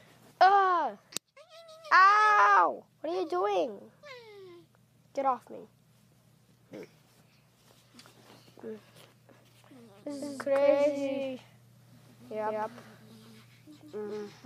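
From 10.21 s to the end, every sound is followed by a second, equally loud copy about 150 ms behind, starting abruptly with no decay or room colour. This doubled audio track is likely a second capture arriving via a slower path.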